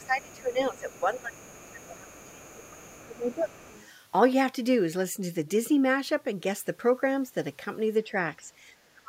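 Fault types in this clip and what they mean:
Other side's voice leaking through: the echo canceller likely left loudspeaker playback in the microphone, so a very faint second voice sits beneath the speech through the opening seconds.
Speech suppressed in double talk: the echo canceller likely confused the talker with echo while both spoke, so the speech drops deeply through the first few seconds and again near the end.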